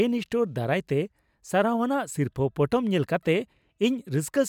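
No technical faults are audible anywhere in the speech.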